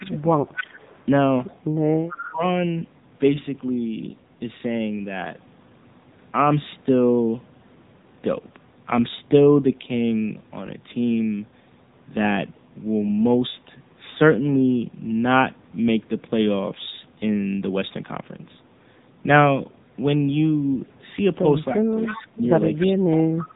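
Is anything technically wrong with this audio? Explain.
Yes, there are three problems in this speech clip.

Throughout, the AMR narrowband mobile codec at 7.95 kbps is plainly audible. Sampling at 8 kHz removes everything above 4 kHz, and the low bitrate makes the voice buzzy and synthetic. A spectrogram shows a hard ceiling at 4 kHz with empty space above it.

Speech suppressed in double talk occurs at 0 to 0.25 s, 2.11 to 2.43 s and 21.74 to 23.45 s. The cause is likely an echo canceller that turned the talker down while the far side spoke at the same time. The voice dips by about 10 dB, then about 20 dB, and late in the clip by about 25 dB. The waveform shows sudden notches in the envelope.

An echo leak runs from 0.1 to 2.28 s and again from 21.94 to 22.26 s. It is likely a loudspeaker echo that the far end's canceller didn't fully remove. A faint copy of the voice trails 303 ms behind, about 15 dB below the speech at first and about 10 dB below later. 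On a spectrogram, the same syllable shapes repeat weakly, shifted 303 ms to the right.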